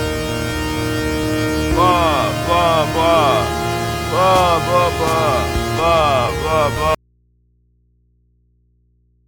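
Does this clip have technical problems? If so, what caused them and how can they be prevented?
Yes. At 6.95 s the sound cuts out abruptly and never comes back. For the rest of the clip only a low mains hum remains, roughly 40 dB below the earlier level. This audio dropout to a faint residue likely comes from a broken connection upstream while the following input stayed live and open, picking up hum. Securing cables and connectors and monitoring the feed while recording would catch such a break immediately.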